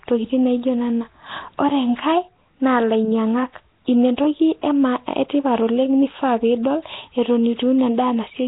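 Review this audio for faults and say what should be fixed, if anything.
Throughout, the speech carries a rough hissy halo and smeared underwater blur, likely Nellymoser compression near 16 kbps. Starved bands are noise-filled, so the spectrogram shows speckled patches and nothing above 3.9 kHz. Capture or re-export through a modern wideband codec at a generous bitrate instead of Flash's microphone codec.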